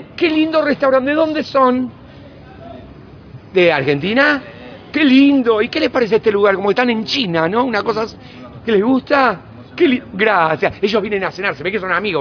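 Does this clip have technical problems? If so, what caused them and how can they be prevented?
No technical faults are audible.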